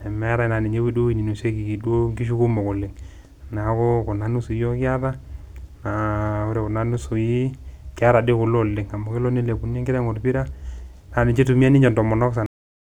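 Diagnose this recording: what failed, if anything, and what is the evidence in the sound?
The failure is a cut-off end, down at the buffer or storage stage. At 12.46 s the speech stops mid-sound and falls straight to digital silence with no decay at all, which tells you the final buffers never got written out, so the recording was truncated rather than faded.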